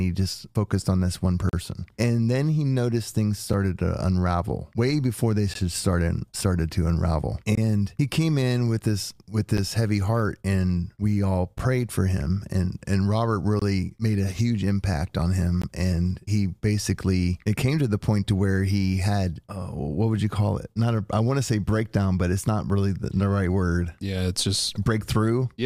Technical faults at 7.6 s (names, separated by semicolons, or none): gap between stream segments